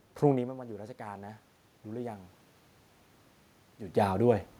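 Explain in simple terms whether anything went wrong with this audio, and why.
Between 0.27 and 2.39 s you hear automatic gain rising. Around half a second in, the talker moved and got much quieter at the microphone. The system noticed and slowly turned its own volume up to make up for it. The voice and the room noise swell louder together.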